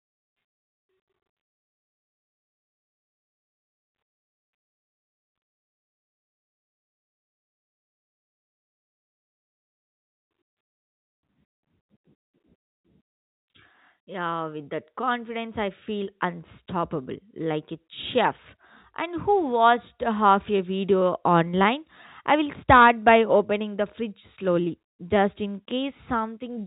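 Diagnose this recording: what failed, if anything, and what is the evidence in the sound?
Nothing here has failed: the speech has simply come down an ordinary G.711 telephone path, which is why it tops out at around 3.8 kHz, and none of the stages along the way leave anything in the sound to point at.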